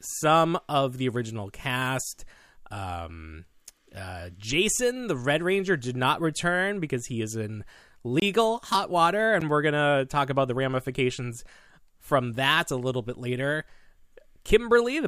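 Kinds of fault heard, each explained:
Block of digital silence: the audio snaps to silence, about 23 ms at 8.20 s after "because he is in" and 12 ms at 9.41 s after "hot water", which fits missed 1024- and 512-sample buffers. The waveform goes flat; the spectrogram shows blank strips.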